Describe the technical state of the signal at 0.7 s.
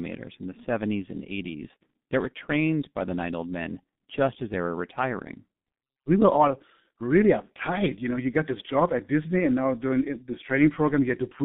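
At 0.7 s the sound carries G.723.1 codec damage, present throughout the clip. The band runs only from 150 Hz to 3.7 kHz, and the heavy coarse frame-by-frame modelling, consistent with roughly 6 kbit/s, leaves speech hoarse with blurred consonants. A simple telephone band filter would muffle without that roughness.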